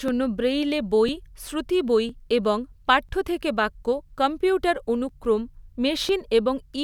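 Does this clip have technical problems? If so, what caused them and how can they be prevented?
Yes, periodic USB or driver dropouts: roughly every 1.00 s from 0.08 to 6.09 s, a background task stalls the audio path and about 2 ms of speech is skipped, causing ticks. Their strict one-second spacing separates them from irregular buffer underruns. Preventing it means disabling USB power saving and the offending background task.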